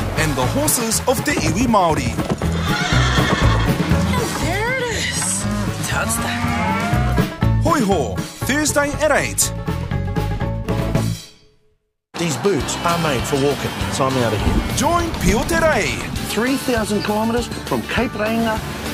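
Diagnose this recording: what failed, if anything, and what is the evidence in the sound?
Nothing failed; no fault is audible anywhere.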